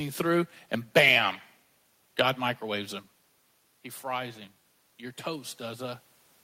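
A speech recording with some room noise in the background. Around 3 s the voice drops as the talker moves back from the microphone. From 4.07 s to 6.08 s there is automatic gain rising. The level controller hears the input fall by about 12 dB and slowly pushes its gain up by about 3 dB. Voice and room noise swell together over those two seconds. The recovery is gradual and only partial.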